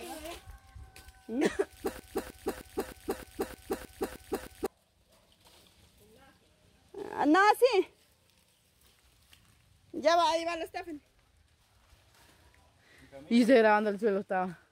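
From 1.99 s to 4.66 s there is a broken-record loop: one 309 ms fragment repeats nine times, identical and back to back, likely because the stream stalled and resent its last piece. Unlike an echo, no copy fades, and the intended audio is lost.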